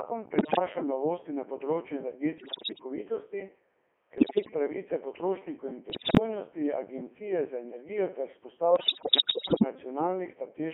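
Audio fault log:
throughout, Codec 2 vocoder: the speech sounds robotic and buzzy, held within a phone-like band of 300 Hz to 3.4 kHz and heavily smeared. The decoder builds the voice anew from sine waves using only pitch, voicing, energy and spectral envelope, which fits Codec 2's 3.2 kbit/s mode, so the original waveform never survives.
0.38 to 0.59 s, 2.38 to 2.84 s, 4.18 to 4.54 s, 5.90 to 6.19 s and 8.76 to 9.64 s, bit errors on digital voice radio: the voice lurches in pitch, loudness and tone and breaks into bleeps, warbles and robotic gibberish. The longest and worst burst is the last. Corrupted bits, from under a tenth to about a fifth of them, feed wrong parameters to the vocoder, so each hit frame is synthesised wrongly.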